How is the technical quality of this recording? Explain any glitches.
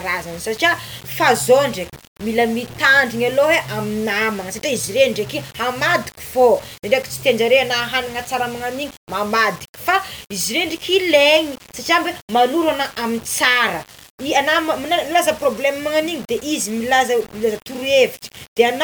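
The recording has one fault that runs through the whole speech clip: a grainy distortion consistent with low bit depth without dither. From start to finish, quiet passages turn gritty, which fits rounding to roughly 6 bits, leaving an error around 20 dB below the signal. Unlike steady hiss, this grit follows the sound.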